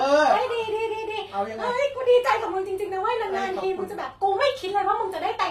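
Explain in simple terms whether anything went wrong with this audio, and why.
Something did go wrong, and it lasts the whole speech clip. The treble sounds bright but unnatural: s sounds come out gritty, metallic or lisping, and the sound stops entirely above about 15.4 kHz. The likely cause is HE-AAC compression, which stores only the lower part of the sound and rebuilds the top by copying lower bands upward. Ordinary muffling would make the top dull. Here it stays airy but fake, with a mismatch where the copied treble meets the real sound.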